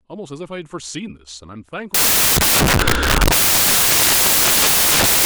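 Samples built from the wrong bytes, from 1.94 s to the end: misassembled bytes put fast-changing low bits on top, so the speech becomes loud, harsh broadband noise.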